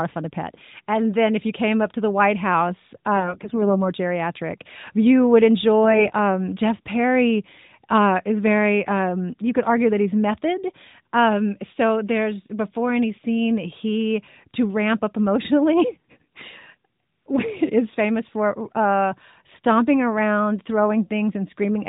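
From 3.17 to 3.71 s and 5.84 to 6.14 s, AMR bit errors corrupt weakly protected frame bits: pulses and fine pitch, gain and spectrum values go wrong, making speech hoarse, scratchy and gargly.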